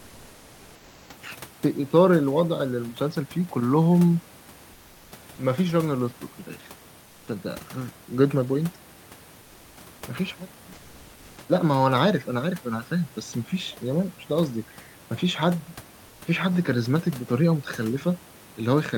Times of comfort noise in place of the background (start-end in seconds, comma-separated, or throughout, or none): 0.00-1.09, 4.73-5.11, 7.03-7.27, 16.07-16.21